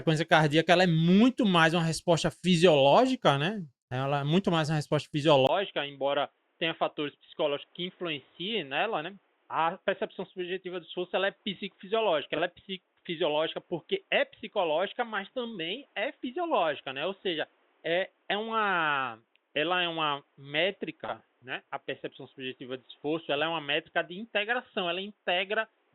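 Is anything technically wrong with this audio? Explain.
Yes, there are two faults.

Input switched to a poorer device: from 5.47 s, right after "muito mais uma resposta", to the end. A brief gap of about 20 ms marks the change. The speech then turns dull and boxy, with nothing above 3.8 kHz, a level a few dB lower, and a new noise floor roughly 40 dB below the voice. This is likely a change to another microphone or a headset call profile.

Frames out of order: at 12.34–12.40 s and 21.04–21.14 s, two neighbouring runs of audio were decoded in swapped order. The runs are 20 ms and 40 ms long, which fits two and four frames each. Each spot sounds like a short garbled flutter, and no time is lost.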